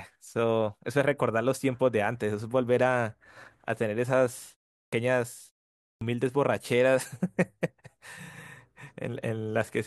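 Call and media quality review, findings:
Clipped start after a pause, 4.80 s and 5.90 s: 125 and 113 ms onsets lost; output device slow to wake. Waveform shows an abrupt vertical edge from silence.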